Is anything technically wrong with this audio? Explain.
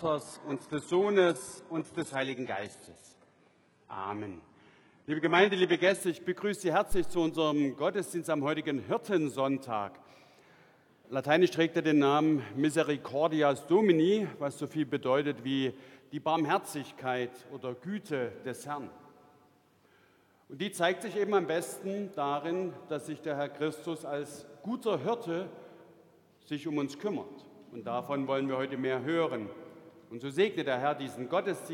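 Yes, two faults. From 0 to 6.0 s, the adaptive stream starts at a low bitrate until the player measures the connection. The sound is dull and smeared, with nothing above 11.5 kHz, then abruptly clears.

From 6.92 to 7.28 s, a phantom power thump occurs when a supply on the live input is switched. The voltage step passes through the coupling capacitors, giving a deep thud that decays in about 82 ms.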